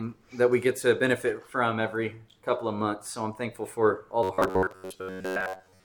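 At 4.23 s the audio turns into robotic sound from repeated short buffers and stays that way to the end. Fresh audio likely arrives too slowly, so most of the time the last fragment of roughly 10.7 ms is replayed while real material is dropped. That loop imposes a fixed buzz at about 93.8 Hz, a stiff metallic drone under the sound. A spectrogram shows evenly spaced horizontal harmonic lines near 94 Hz intervals, and the waveform shows identical blocks repeating.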